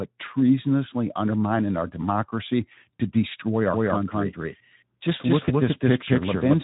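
At 2.97 to 3.01 s, just after "treasonously undermining our democracy", VoIP packet loss concealed by the speech codec breaks the speech. About 40 ms of audio went missing, which fits two lost frames. The decoder stretched its last sound into a brief buzzy tone or coloured noise that fades. A shorter, similar smear follows at 5.45 to 5.53 s, fitting one lost frame.

From 3.74 s to the end, a doubled audio track is heard. A second, dry copy trails about a fifth of a second behind, at roughly equal loudness. It cuts in abruptly. A slower second capture path is the likely cause.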